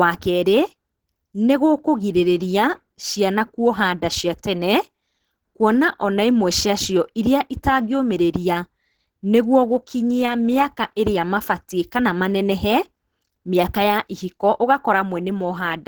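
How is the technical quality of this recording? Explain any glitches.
The technical quality is compromised by plainly audible Opus compression damage, present for the whole clip. The speech sounds hoarse and muffled in its body, with a grainy, rough texture. High-frequency content still reaches about 20.1 kHz, but it sounds noisy rather than clean. The likely cause is Opus running in its hybrid mode at a low rate, which fits roughly 16 kbps. Hybrid mode codes the lower band with the speech coder and fills the upper band coarsely. That split produces this mix of hoarse and grainy sound.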